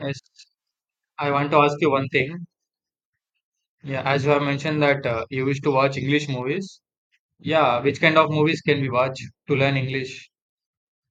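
No technical faults are audible.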